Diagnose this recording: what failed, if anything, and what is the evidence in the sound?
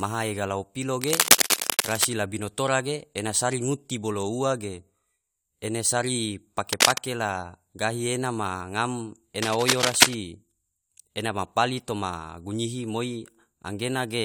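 Cable scratch noise in the analogue wiring, from 1.01 to 2.05 s after "maha ega lao pilo", 6.72 to 6.98 s after "ene sari", and 9.42 to 10.14 s after "gahi ena ma ngam". Dense, ragged scratching rides over the speech, a little louder than the speech itself. The likely cause is a worn cable or connector being moved, so its contact resistance jumps rapidly and injects bursts of uneven noise into the signal.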